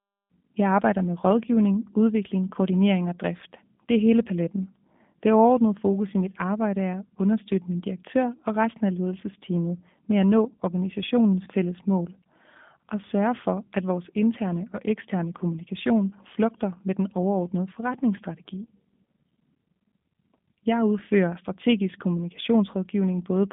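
G.729 codec damage runs through the whole speech clip: rough, synthetic speech with nothing above 3.7 kHz, fitting an 8 kbit/s pulse-coded rebuild of a 200 Hz to 3.6 kHz line.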